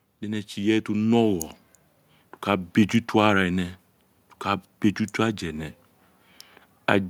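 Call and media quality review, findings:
Automatic gain rising, 0.21–1.59 s: speech and background noise swell together by about 6 dB over roughly 1.4 s. Component: capture AGC, raising gain on a too-quiet input. Noise floor climbs with the speech, unlike compressor pumping.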